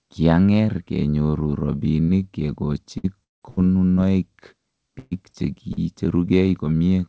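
At 2.04 s comes a short concealed packet loss: about 40 ms never arrived and was filled by extending the preceding sound, giving a brief smear with no audible gap. At 2.98 s a burst of packet loss drops about 60 ms; the fill stretches into a held buzz or fading hiss before the sound jumps ahead. From 3.24 to 3.43 s the fill dies away into near-silence lasting roughly 170 ms, likely a long network dropout, set apart from the bursts by that empty stretch. Another burst follows at 3.49 s, losing 80 ms. A second short loss at 3.95 s fills only 20 ms and passes as a brief smear. The longest burst, at 4.99 to 5.13 s, spans 120 ms of fading fill with no true silence. A final short loss at 5.73 s smears about 40 ms. The band stops at 8 kHz, which fits a wideband call codec.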